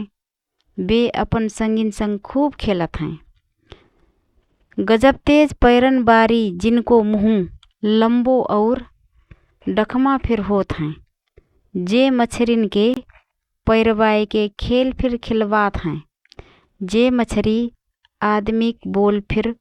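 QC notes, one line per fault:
12.94 to 12.97 s, Bluetooth stall: the speech drops abruptly into a hole of silence about 25 ms long, then carries on with no fade in or out on either side. This is likely a wireless hiccup: interference delayed audio packets, the receiver's buffer ran empty, and output stopped for that instant until retransmitted data arrived and playback resumed.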